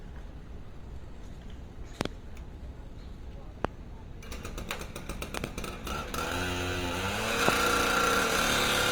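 The whole recording of everyday sound carries Opus compression. It is plainly audible. Tones lose their clean edges and turn rough, grainy and noisy. There is little of the swirling MP3 gives. The audio still reaches about 20.1 kHz, so nothing is muffled. This points to the music (CELT) mode at a low rate, which fits roughly 24 kbps. The likely cause is an encoder starved of bits, filling bands with noise.

Loud pops then cut in four times. A double pop comes at 2.01 to 2.08 s. A single pop follows at 3.65 to 3.67 s. Another double pop lands at 5.37 to 5.46 s. A last single pop sits at 7.49 to 7.51 s. Each peaks about 25 dB above the sound, which continues underneath. They are likely sudden voltage spikes, as from a plug, switch or static.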